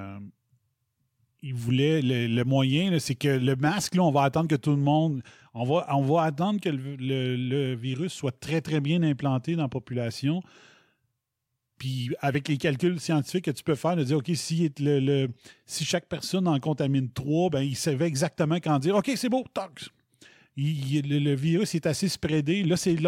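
No technical faults are audible.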